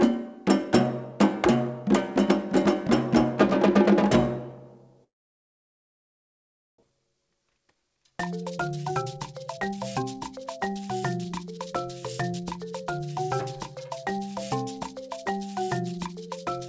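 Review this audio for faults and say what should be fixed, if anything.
A long network dropout, likely from packets ceasing to arrive, hits 5.04 to 6.84 s. The receiver stretches the last sound into a short fading buzz, then leaves near silence, and about a second of audio is never heard. To prevent it, stabilise the network link or add redundancy such as forward error correction so brief outages can be recovered.

Jitter buffer speed-up follows as the buffer, overfilled by roughly 0.7 s of delayed packets arriving together, trims pitch-period-sized pieces. It runs at 115% speed from 6.92 to 10.82 s and at 110% from 11.24 to 11.67 s and 12.33 to 13.04 s, sounding hurried at unchanged pitch. To prevent it, tune the jitter buffer to drain excess delay more gently over a longer span.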